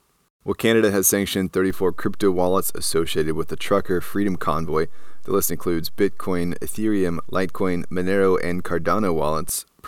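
At 1.70 s the waveform's zero line jumps, a DC step of about -24 dBFS, the kind of shift that comes from a converter recalibrating or an offset input being switched into the path. The offset holds until 9.49 s, when it steps back. Each jump sounds as a brief low thump, once at 1.70 s and again at 9.49 s. Between them the speech carries on unchanged, riding on the shifted baseline.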